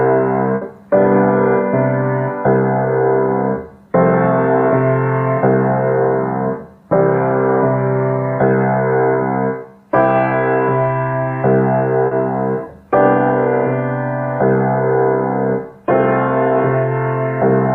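At 0.55 s, a burst of packet loss cuts out about 60 ms of audio that arrived too late or never arrived. The receiver stretches the last sound across the hole and fades it, so a held, dimming tail stands in for the missing stretch until the sound resumes just after 0.63 s.

At 12.07 s, short concealed packet loss leaves the decoder without roughly 40 ms of audio. It fills the gap by continuing the preceding sound and blending back into the real signal by 12.13 s, heard as a brief smear or wobble.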